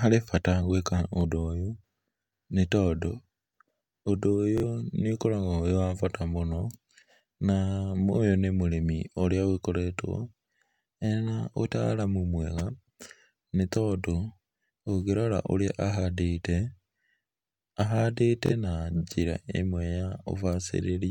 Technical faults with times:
1.21-1.25 Bluetooth stutter
4.58-4.64 Bluetooth stutter
18.46-18.53 Bluetooth stutter

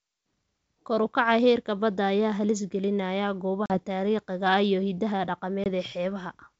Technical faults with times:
3.66-3.79 packet loss on an ADPCM call
5.64-5.68 packet loss on an ADPCM call

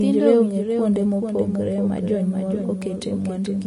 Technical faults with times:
0.00-3.67 doubled audio track
0.00-3.67 Vorbis compression
2.82 block of digital silence

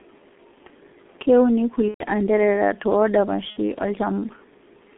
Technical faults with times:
0.00-4.98 G.723.1 codec
1.88-2.03 VoIP packet loss concealed by the speech codec
3.50-3.57 VoIP packet loss concealed by the speech codec

